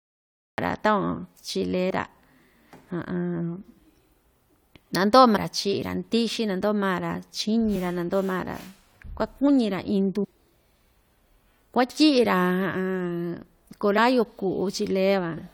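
A speech recording with a cut-off start: it is digitally silent until 0.58 s, then the speech enters abruptly mid-sound, because the recording began late. Brief glitches from damaged data in a compressed stream occur at 1.89 s, 5.35–5.37 s, 7.74 s, 10.23–10.25 s and 13.97–13.99 s. Corrupted frames there lose the decoder its sync.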